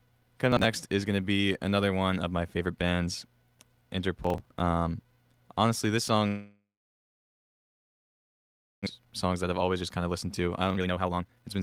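At 0.52 to 0.65 s, and again at 4.24 to 4.60 s, a gritty burst of processor overload crackle tears across the speech before it clears. The processor fell behind and missed a run of buffer deadlines in a row. Each missed buffer was skipped rather than filled, so the audio jumps forward with a hard edge again and again. The rate of those edges fits buffers of about 10 ms, roughly fifteen lost in the first burst and around twenty in the second.

From 6.27 s to 8.89 s the speech breaks off into a buzzy continuation of the last sound. It fades over about 0.4 s and leaves about 2.2 s of silence. When the voice returns, about 1.6 s of speech is simply gone. This is likely a long network dropout. No packets arrived, the receiver stretched out what it last had and then went quiet, and the late audio that followed had built up around a second of extra delay.

From 8.98 s to 11.56 s the speech sounds rushed but keeps its pitch, running at about 132% of normal speed. 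This is a jitter buffer speed-up. With too much audio queued after the dropout, the receiver kept cutting out short pitch-period-sized pieces to catch up, trimming roughly a second in total.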